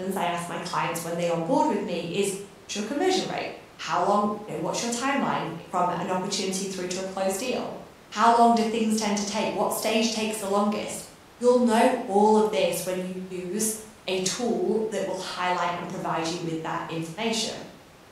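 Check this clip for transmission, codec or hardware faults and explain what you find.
No transmission, codec or hardware faults can be heard in this speech recording. Nothing in the audio calls for a fault to be explained.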